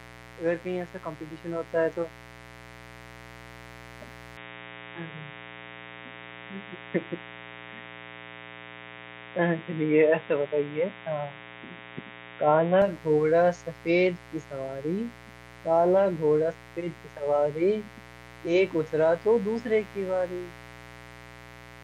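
A speech recording with two faults. Throughout, a dimmer, rectifier or unshielded cable has let sharp switching spikes from a 60 Hz supply into the signal chain, twice per mains cycle. The result is mains buzz: a steady, raspy hum whose harmonics climb well into the kilohertz range, sitting roughly 20 dB below the speech and audible under every pause. From 4.37 s to 12.82 s, the input was likely switched mid-recording to a poorer device, such as a second microphone or a headset's call profile, and then back. That device passes nothing above 3.8 kHz, so the speech turns abruptly dull and boxy at 4.37 s and clears again at 12.82 s. Neither switch has a gap, and the loudness stays about the same. The substitute device also brings its own faint background noise, around 40 dB under the speech.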